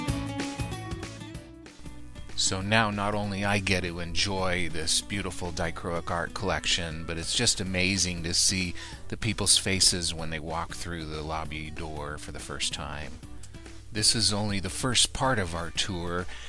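No technical faults are audible.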